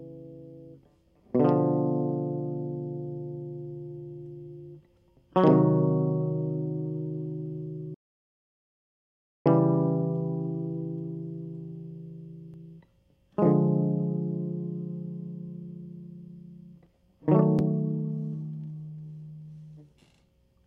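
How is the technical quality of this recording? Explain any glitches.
The recording has one clear glitch, an audio dropout to silence. At 7.94 s the music cuts off mid-flow. It returns abruptly at 9.46 s, so about 1.51 s of the performance is missing. The gap is silent, with no room tone or noise floor underneath. The likely cause is a lost input, such as a momentary disconnection or mute, while the recorder kept writing silence. Whatever played during that stretch is gone for good.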